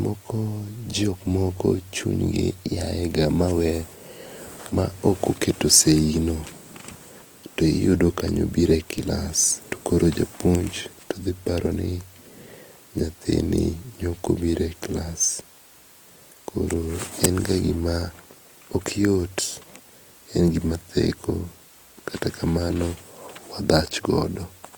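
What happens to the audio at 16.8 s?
At 16.8 s the speech sounds rough and grainy, with a noisy texture over its tones, and this runs through the whole clip. The likely cause is Opus compression in its CELT music mode, filling bit-starved bands with folded or noise energy at what sounds like about 24 kbps, while full bandwidth is kept up to 20.1 kHz.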